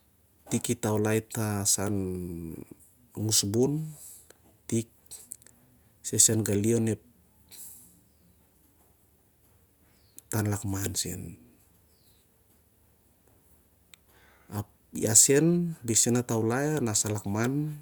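Speech recording, no technical faults audible anywhere in the clip.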